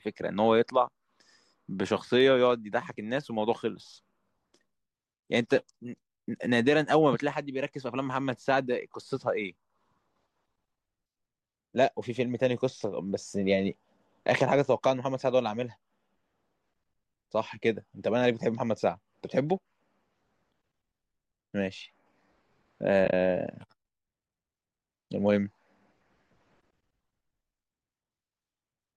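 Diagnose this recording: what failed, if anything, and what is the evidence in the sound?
At the network and codec stage, the speech shows AAC frame loss with muting between 23.05 and 23.13 s. Short stretches drop to silence with soft fades rather than clicks, about 50 ms of audio gone across 80 ms, the longest gap roughly 20 ms. That pattern fits several lost 10 ms frames whose spectra the decoder zeroed, with the overlapping windows tapering each edge. A spectrogram shows narrow, full-band blank columns with blurred borders. The waveform shows smooth dips to zero.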